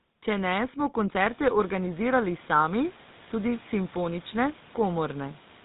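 From start to finish the speech runs through the GSM full-rate codec. Everything above 4 kHz is gone, and the coarse pulse excitation leaves a buzzy, gravelly roughness, which fits a 13 kbps stream. The room noise climbs by about 21 dB around a second in and then sits about 27 dB under the speech.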